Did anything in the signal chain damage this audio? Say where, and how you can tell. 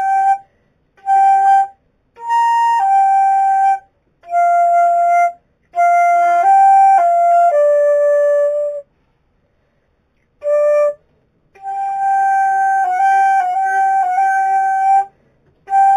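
Yes. Imaging from linear upsampling occurs throughout, at the sample-rate conversion stage. Audio carrying nothing above 4 kHz, consistent with an 8 kHz original, was raised to 44.1 kHz with straight-line interpolation. A mirrored copy of the band sits between 4 and 8 kHz, roughly 35 dB down. Unlike aliasing, it mirrors upward above the original band edge instead of folding downward.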